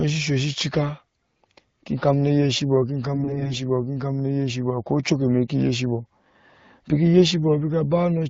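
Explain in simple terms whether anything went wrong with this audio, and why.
From 3.14 to 3.59 s the speech turns hoarse and gargly. These are AMR bit errors: about one bit in ten got flipped, garbling the finer voice details.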